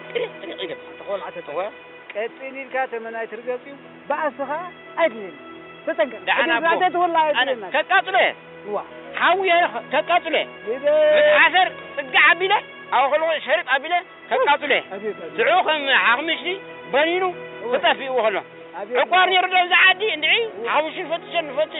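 No technical faults can be heard anywhere in this audio, so there are none to describe in time order.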